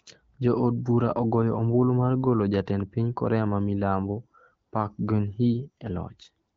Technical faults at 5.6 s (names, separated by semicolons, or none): none